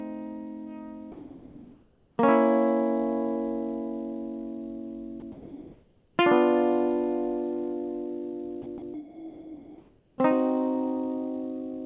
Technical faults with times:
1.12-2.18 sound dropped by the voice detector
5.20-6.18 sound dropped by the voice detector
8.62-10.18 sound dropped by the voice detector

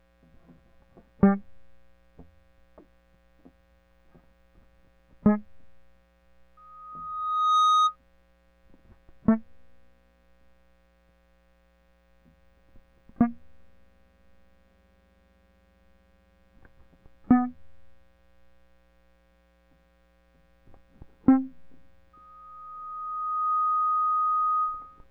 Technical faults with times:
6.57-7.96 loudspeaker feedback squeal
22.13-25.04 loudspeaker feedback squeal

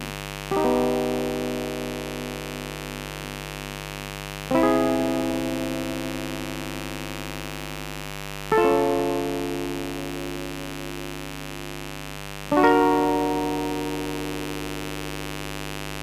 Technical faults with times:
0.00-16.02 mains buzz

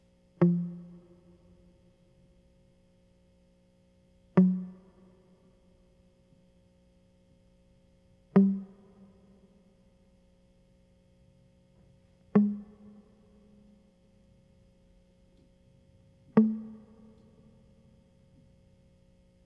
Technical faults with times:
none

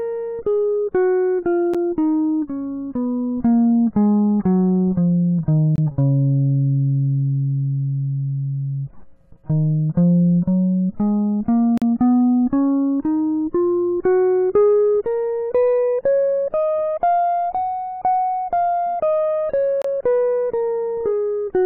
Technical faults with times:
1.74 gap between stream segments
5.76-5.78 gap between stream segments
11.78-11.82 gap between stream segments
19.82-19.85 gap between stream segments

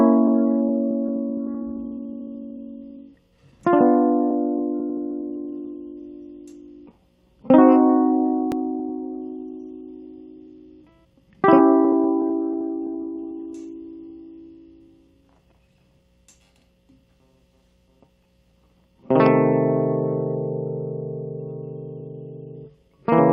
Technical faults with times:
0.00-23.32 clock drift between sender and receiver
8.79-18.96 repeated timing corrections
22.00-23.10 repeated timing corrections

